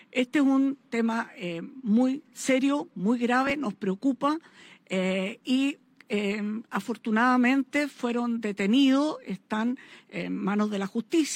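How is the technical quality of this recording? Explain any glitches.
No glitches are audible anywhere in the recording, and there is nothing to explain.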